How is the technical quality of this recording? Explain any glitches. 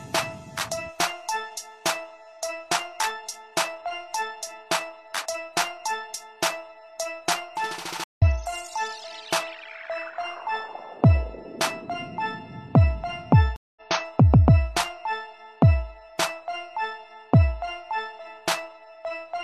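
Two glitches, both stream reconnects. At 8.04 s and 13.56 s the connection drops, the audio goes silent for about 0.14 s and 0.2 s, and a fresh decoder resumes roughly 0.1 s and 0.2 s further along, so a little material is skipped.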